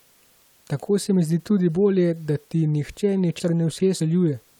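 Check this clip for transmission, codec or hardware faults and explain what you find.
One transmission fault is present in this speech clip: chunks out of order between 3.4 and 4.0 s. A 200 ms chunk plays two chunks late, after the ones meant to follow it. Nothing is lost, but the sequence scrambles briefly, with three hard joins.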